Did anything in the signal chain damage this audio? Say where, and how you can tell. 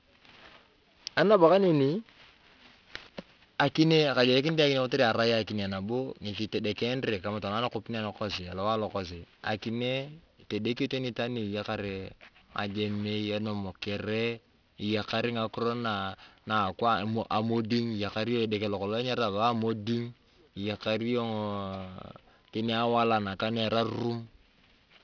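Yes. Aliasing is present throughout, from sample-format conversion. Sibilants sound gritty and metallic, and the spectrum runs hard up to 5.5 kHz. That fits a drop to an 11 kHz rate without an anti-alias filter. Higher content folded back as wrong pitches.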